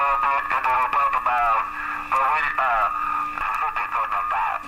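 At 3.41 s the sound lurches forward with a tiny blip: the audio before the join and the audio after it don't belong together, so the flow breaks abruptly rather than fading or pausing. This is a stream segment skipped. The likely cause is that one chunk of a segmented stream failed to load and the player carried on with the next chunk, so a stretch of the programme never reaches the listener and the playback simply jumps ahead.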